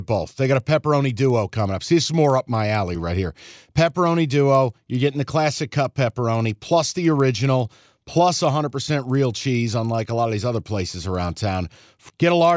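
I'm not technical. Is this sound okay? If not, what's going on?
No. A resampler restarted on every block converts each 50 ms piece of speech separately, leaving a tick at every seam, 20 per second, heard whenever someone is speaking.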